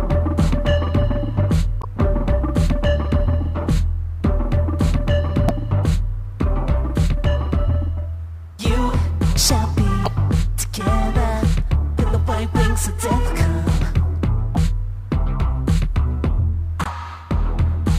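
Damaged data in a compressed stream breaks this audio in five places: 1.79–1.85 s, 5.46–5.51 s, 10.03–10.08 s, 14.53–14.57 s and 16.82–16.87 s. At each point the compressed bytes are corrupt, so the decoder misreads those frames, loses sync and hunts for the next valid frame header. Each failure comes through as a brief chirp or blip, about 40 to 55 ms long, cutting into the sound.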